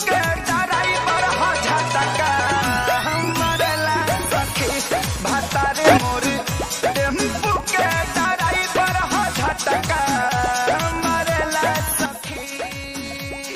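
All the way through there's a buzz at 25 Hz, a steady ticking that rises and falls with the level of the sound. That's the filter restarted on every block: it drops its memory at each block boundary and starts from silence, so each block opens with a small transient. Ticks 40 ms apart point to blocks of that length, and because each transient scales with the signal, the buzz grows in loud passages and fades in quiet ones.

At 5.85 s everything, background noise included, jumps up by about 8 dB in one step and stays there until 5.98 s, then drops back. From 12.06 s to the end, the sound and the noise floor drop together by about 8 dB. Both are sudden gain jumps. Because the level changes in a single step with no fade, the cause is likely a gain setting applied instantly from one sample to the next rather than ramped in.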